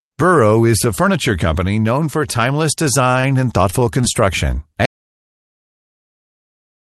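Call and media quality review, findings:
Short stall from a late packet, 3.11–3.15 s and 3.21–3.31 s. Jitter buffer underrun; last sound stretched about 16 ms, then 23 ms, slight buzz, no content lost.

Repeated packet loss (robotic sound), 3.70–4.17 s. Four gaps, longest 23 ms, about 60 ms missing; concealment on each hole gives choppy speech.

Audio dropout to silence, 4.86 s to end. Speech cuts mid-flow to silence, no room tone; likely lost input device, failed link or stray mute. Opus path, 12 kHz band-limited, consistent with 32 kbps.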